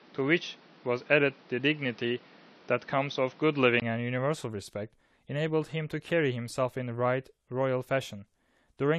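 From 0.0 to 3.82 s, the speech sounds narrower and boxier. Nothing reaches above 6.2 kHz. A noise floor sits roughly 30 dB below the speech. At 3.82 s, a silence of about 20 ms breaks the audio. The full band then returns. The level shifts by around 5 dB, and the tone and background change. The likely cause is an input switched from a poorer device, such as another microphone or a headset's call profile, to a better one.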